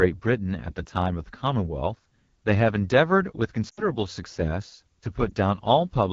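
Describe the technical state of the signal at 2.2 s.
AMR wideband (HD Voice) coding is active at 2.2 s, as it is throughout the speech. The pulse-driven vocal tract model is starved of bits, leaving the speech plainly rough and raspy with a synthetic noise top above 6.4 kHz, which fits one of the codec's lowest rates, around 8.85 kbit/s.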